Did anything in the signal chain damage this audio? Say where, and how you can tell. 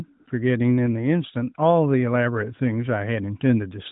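Yes, at the codec stage: there's a burst of AMR comfort noise from 0.20 to 0.26 s, about 60 ms where the phone stopped sending speech frames and the receiver patched the gap with smooth, steady synthetic noise instead of the real background, still capped at 4 kHz like the rest of the AMR-NB audio.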